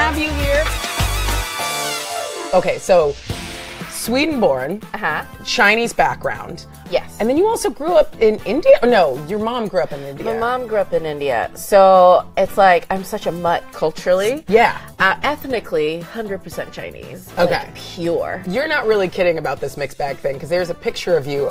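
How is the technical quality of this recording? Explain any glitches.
No technical faults can be heard anywhere in this recording. There are no glitches to explain.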